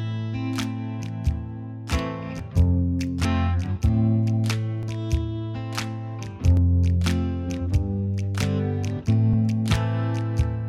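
At 2.39, 4.83, 6.57 and 9.33 seconds there's a sudden jump forward in the sound, with no gap of silence, just a hard splice. That's most likely a dropped buffer (overrun), where the software didn't collect its samples before the hardware overwrote them, so a chunk vanished and the two sides got butted together. The first and last skips lose roughly 20 ms, the middle two around 50 ms.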